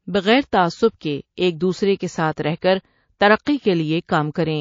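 Throughout the speech, the likely cause is MP3 compression at a starved bitrate, with damage that is plainly audible. With too few bits to go round, the encoder has lopped off the upper treble at a fixed point and discarded weaker frequency lines, which flicker in and out between frames. The result is a dull, watery, swirling quality with chirpy, metallic s sounds and softened consonant onsets, consistent with a rate around 32 kbps.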